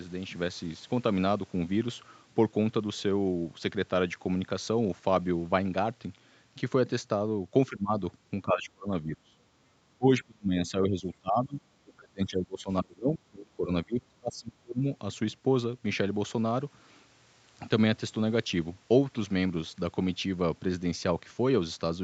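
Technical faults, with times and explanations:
7.69–7.93 s, 8.45–9.37 s, 9.98–11.61 s, 11.83–14.86 s: speech suppressed in double talk. The speech dips by roughly 15 to 30 dB in pieces, likely an echo canceller turning down both sides during overlap.
9.65–9.70 s: background gated by the echo canceller. The room sound drops by about 8 dB for 50 ms while far-end playback holds the microphone down.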